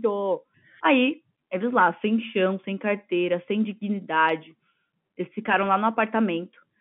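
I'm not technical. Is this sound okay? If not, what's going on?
Yes, nothing stood out on listening, and the narrow, phone-line quality of the speech is just how an ordinary telephone call sounds.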